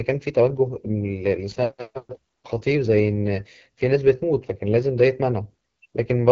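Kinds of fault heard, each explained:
AMR wideband (HD Voice) codec: The speech has been squeezed through a low-rate wideband speech coder that rebuilds the voice from a model of the vocal tract driven by pulses, and the roughness and rasp this leaves are plainly audible, which fits the 8.85 kbit/s mode near the bottom of its range. Unlike narrowband phone coding, which stops near 3.4 kHz, the band here reaches about 7.3 kHz, with the top stretch noise-filled rather than truly detailed.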